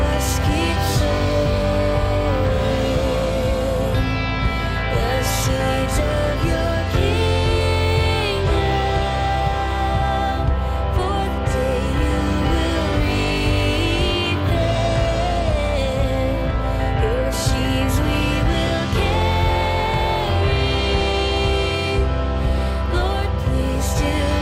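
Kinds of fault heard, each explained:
Nothing stood out on listening; no problem with the sound could be heard at any point.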